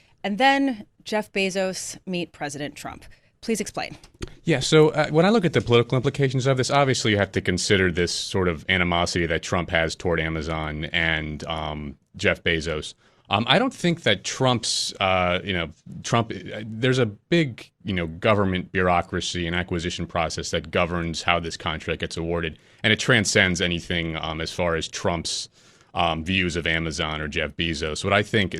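Speech recording with no technical faults detected anywhere in it.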